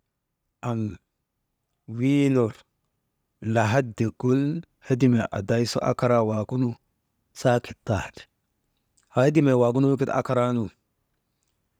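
A speech recording with automatic gain rising from 0.62 s to 6.84 s, ending just before "saakit taani". Over those six seconds the level climbs by about 5 dB, and the background noise floor rises in step with the voice. That shared, gradual swell shows the automatic gain control judged the input too quiet and kept raising its gain, rather than the talker getting louder or closer to the microphone.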